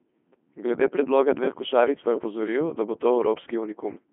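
Speech, passed through a Codec 2 vocoder for its whole length. Only 200 Hz to 3.4 kHz survives, with nothing above 3.7 kHz. Resynthesis from sine waves makes it heavily robotic and buzzy, which fits a 2.4 kbit/s mode.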